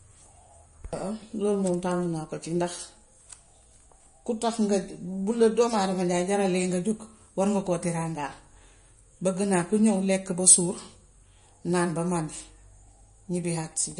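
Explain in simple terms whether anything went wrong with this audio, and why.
Something did go wrong, and it lasts the whole clip. The speech sounds dull and watery. Nothing is left above about 10.6 kHz, so the crisp top end is gone, and s sounds come out smeared and swirly. The damage is easy to hear. This is MP3 compression. It was likely squeezed too hard, so it kept only what it judged most important and threw away the high treble and fine detail.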